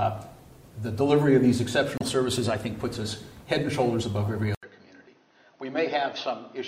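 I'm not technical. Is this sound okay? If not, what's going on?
No. From about 1.98 to 2.03 s there is a brief chirp or blip. That is damaged data in a compressed stream: a small part of the file was corrupted, so the player briefly misread it and jumped to where it could continue.

At about 4.55 s the sound drops out for a split second, then returns noticeably quieter, duller and more muffled until the end, with nothing above about 6.3 kHz and a faint new background noise. This is likely an input switched to a poorer device, meaning the recording changed to a lower-quality microphone partway through.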